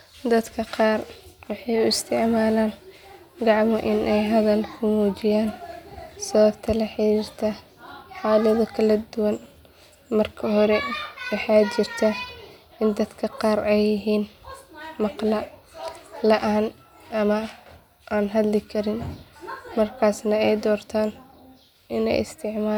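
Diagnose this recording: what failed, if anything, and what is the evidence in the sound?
Nothing in the speech points to a failure at any stage of the chain, so there is nothing to diagnose.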